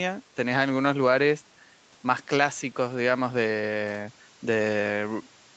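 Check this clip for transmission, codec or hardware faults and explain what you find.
No transmission, codec or hardware faults are audible: the speech carries the ordinary character of a call path, with nothing above 8 kHz and the usual coding texture expected of an Opus stream at around 40 kbps.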